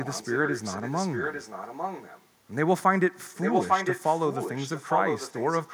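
A delayed copy of the speech trails it by about 0.85 s from 0.0 to 2.27 s, about 5 dB quieter, then at equal level from 3.34 s to the end: likely echo leak from a loudspeaker-side canceller.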